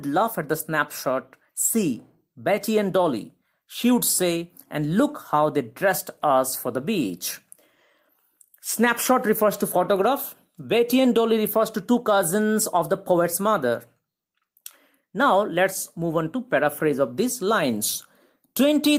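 No technical faults are audible.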